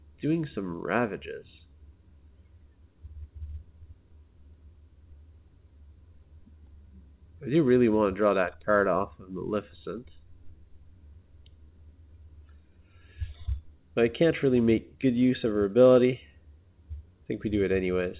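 No faults heard; the audio has the narrow telephone-band sound of a call path, with nothing above 4 kHz, consistent with G.711 A-law coding.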